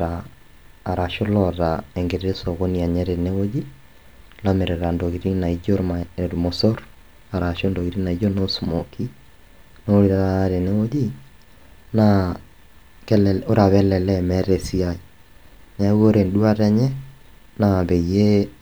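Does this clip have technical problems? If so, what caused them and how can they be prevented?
No, nothing in this speech recording stood out as a technical problem on listening, so there is nothing here that needs preventing.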